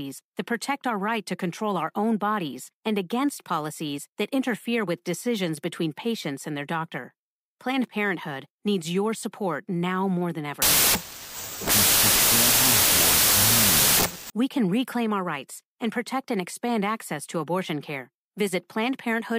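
From 10.62 to 14.3 s the speech falls into loud, harsh noise, with the voice buried underneath at half speed and an octave low. This is a wrong sample width fault. The sound fits 32-bit samples being read as 16-bit: each sample splits into two values, one holding the real top bits and one holding meaningless low bits, which doubles the sample count. A plain sample-rate error would slow the speech just as much but leave it clean, without this noise.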